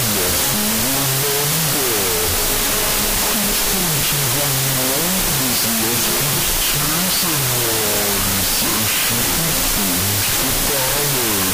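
Loud harsh noise buries the sound for the whole clip, slowed to half speed and an octave low: wrong sample width, which fits 32-bit float samples read as 16-bit integers.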